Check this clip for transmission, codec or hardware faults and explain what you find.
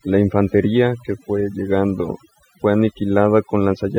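One fault runs through the whole clip, and it comes from processing rather than the link or hardware. Overdone noise removal, throughout: the denoiser was pushed too hard, cutting any frequency band near its noise estimate, taking quiet speech detail with it. The background drops and breaks up into twinkling specks.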